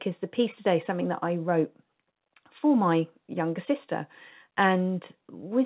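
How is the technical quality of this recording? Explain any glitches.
There are no glitches to explain in this recording; the G.711 mu-law call path leaves nothing above 4 kHz.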